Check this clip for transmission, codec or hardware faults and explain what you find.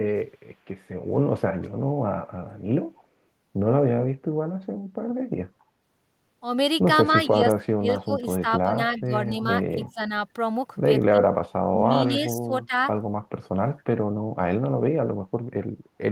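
Two faults stand out in this speech clip: a faint echo leak and some speech suppressed in double talk.

Echo leak shows up at 1.61–1.70 s, 2.95–3.06 s and 8.97–9.02 s as a short, quiet copy of the speech trailing the original by 269 ms. It sits about 30 dB below the speech in the first and third spots and about 35 dB down in the second. The likely cause is a far-end loudspeaker setup whose echo canceller didn't fully scrub what its mic picked up, so those scraps came back down the line.

Speech suppressed in double talk hits four stretches: 7.13–9.32 s, 9.74–10.12 s, 11.18–11.29 s and 12.05–12.73 s. The speech dips and drops out in pieces. In the first stretch it adds up to around a second, and the deepest cut there is about 25 dB. The later ones reach about 15, 15 and 20 dB. This is likely an echo canceller that couldn't tell the local talker from loudspeaker echo while both sides spoke, so it turned everything down.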